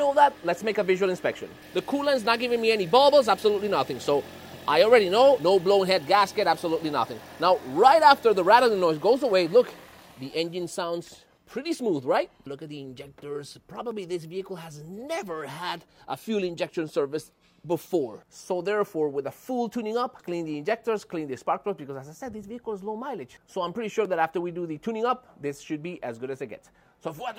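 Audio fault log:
No faults are heard anywhere in this audio. Nothing in it calls for a timed entry.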